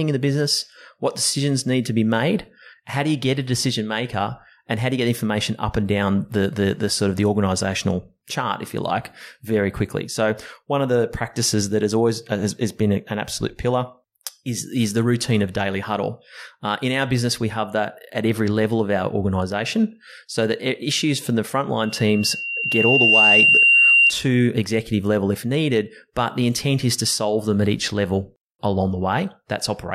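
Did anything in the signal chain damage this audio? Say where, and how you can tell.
Yes. From 21.80 s to 24.14 s a loudspeaker feedback squeal at 2.8 kHz builds over about one and a half seconds to roughly 10 dB above the speech. This is an acoustic loop in the analogue stage: the microphone picks up its own loudspeaker, and loop gain exceeds one at that frequency.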